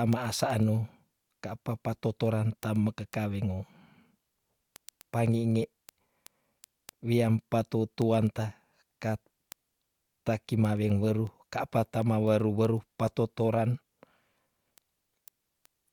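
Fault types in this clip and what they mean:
Word clock ticks: The speech runs through a digital link read on an unlocked clock, off by around 200 ppm, so a sample slips about every 0.15 s. The result is roughly 150 sharp ticks of uneven strength from 0.13 s to 15.9 s.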